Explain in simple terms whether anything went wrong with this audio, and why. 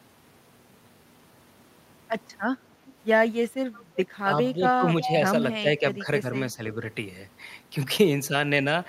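A faint, delayed repeat of the talking slips in at 2.86–2.93, 3.73–3.84 and, much louder, 5.02–5.09 s, trailing about a third of a second behind. This is an echo leak, likely from a loudspeaker on the far end whose echo canceller let some sound back down the line.

The talker's voice briefly sinks or thins at 4.54–4.87, 5.05–5.09, 5.61–6.25 and 6.52–6.63 s, most deeply in the first stretch. This is speech suppressed in double talk: both sides likely spoke at once, and the echo canceller turned the talker down along with the echo.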